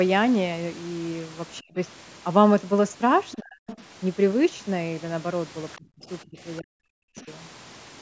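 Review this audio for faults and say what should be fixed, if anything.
Speech suppressed in double talk at 1.6–1.77, 3.36–3.67, 5.78–6.38 and 6.6–7.28 s: the speech sinks by up to about 40 dB, likely because the echo canceller mistook overlapping talk for echo. Unlike a network dropout, it ducks and frays rather than stopping abruptly.

The other side's voice leaking through at 3.31–3.36, 3.67–3.82 and 7.17–7.24 s appears as faint scraps well below the speech, likely residual loudspeaker echo. Unlike crosstalk, it clusters around the suppressed stretches.

Better double-talk detection and a longer or better-converged echo-canceller filter, or using a headset, would prevent both.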